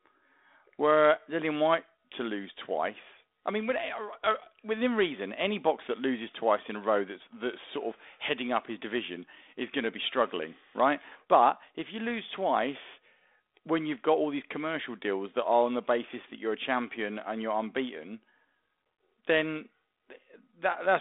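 No technical faults occur.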